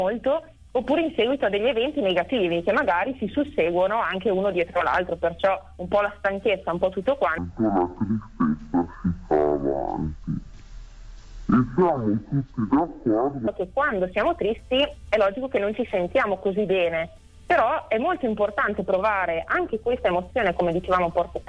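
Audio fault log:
7.38–13.48 s, wrong sample rate: the sound drops to half speed and falls a full octave (12 semitones), with pitch and tempo sliding down together and everything dragging and thickening until normal playback resumes at 13.48 s. Because duration and pitch shift by the same factor of two, the samples are being clocked out at half the intended rate with no conversion, which fits audio captured at 44.1 kHz being played back at roughly 22 kHz.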